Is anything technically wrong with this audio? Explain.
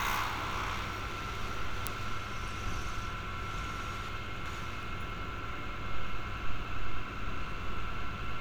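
Yes. Chunks out of order occur from 1.12 to 1.86 s and from 4.09 to 4.83 s. In each, a 0.37 s block arrives one chunk late and plays after its successor, giving a jumbled moment.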